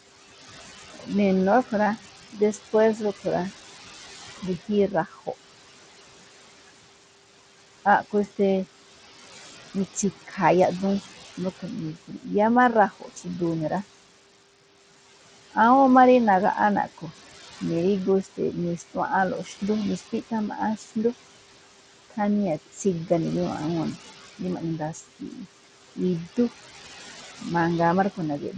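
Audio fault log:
throughout, noise suppressor artifacts: The suppressor pulls down every band it judges to be steady noise, by about 17 dB, recalculating frame by frame. The room noise, which sits about 16 dB below the speech, falls away in the pauses and comes back up under each phrase. The leftover noise is reduced unevenly from frame to frame.
throughout, Bluetooth SBC compression: The link was likely carrying SBC at a small bit pool, roughly in line with 80 kbps. SBC splits the signal into a few wide sub-bands and hands out bits without any model of hearing, so the weaker upper bands are starved while the rest are quantised coarsely. The damage is plainly audible: the treble flickers in and out below the 8 kHz ceiling of the call path, and a gritty, aliased roughness clings to the speech.
0.94–5.28 s, 9.94–13.71 s and 15.53–28.55 s, speech cut by the noise suppressor: In each of these stretches the suppressor mistakes quiet parts of the speech for background and turns them down with it. 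The dips reach about 14 dB in the first span and about 16 dB in the other two. Altogether they add up to about half a second in each of the first two spans and about a second in the last. Soft consonants and trailing word endings come across as swallowed or faint.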